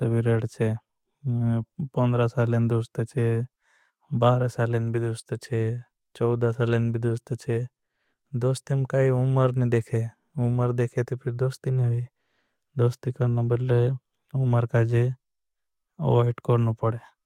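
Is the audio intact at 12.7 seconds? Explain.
Yes, at 12.7 seconds the speech plays through intact, with no dropout, click, distortion or other fault at that moment.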